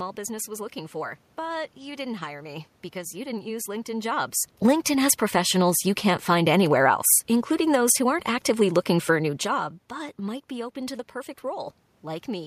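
The signal path shows no technical faults; the steady room background belongs to the recording itself, and the level shifts around 4 s and 9 s come from the talker moving relative to the microphone rather than from the system.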